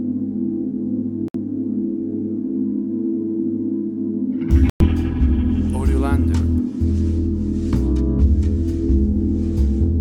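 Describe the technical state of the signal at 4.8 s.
At 4.8 s the signal is inside a gap from 4.70 to 4.85 s, about 150 ms of silence. This is likely a Bluetooth dropout. Audio packets failed to reach the headphones in time and were discarded, so the output fell silent. The loss fits roughly seven missing frames. The edges of the hole are abrupt or fade over a few milliseconds. When the sound returns, it has moved ahead in time, as though it had kept playing through the gap.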